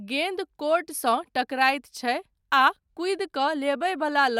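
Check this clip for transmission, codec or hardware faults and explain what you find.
No transmission or hardware faults.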